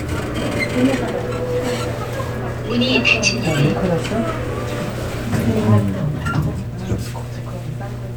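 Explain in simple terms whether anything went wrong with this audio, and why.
A steady low buzz runs under the whole recording, from start to finish: that's mains hum at 60 Hz. The power supply's electricity has leaked into the audio, probably through a ground loop or a nearby transformer, and it's fairly loud, sitting not far below the actual sound.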